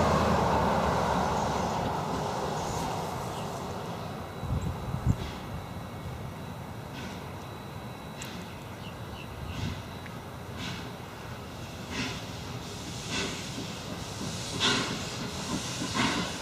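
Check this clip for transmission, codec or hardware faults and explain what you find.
One fault is present, a repeated buffer at 6.36 s. New audio arrived too late, so the device replayed its last block of about 5 ms once more. The hard join produces a brief click, and roughly 5 ms of audio is lost.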